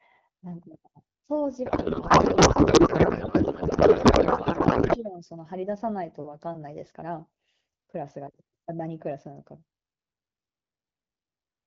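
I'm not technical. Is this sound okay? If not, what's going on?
No. From 1.66 to 4.97 seconds the speech turns into garbled, warbling noise that barely follows it. This is a codec payload misread: the phone system's two ends disagreed about how the HD Voice data was packed, so the receiver unpacked it wrongly.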